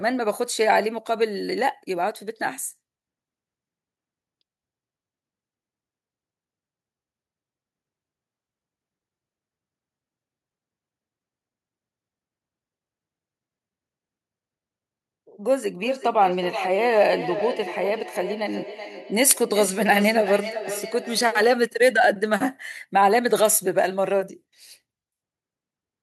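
From 15.64 to 21.55 s the speech returns roughly every 0.4 s, thin and ringing, about 11 dB down. This is feedback echo between two devices, each replaying the other's pickup.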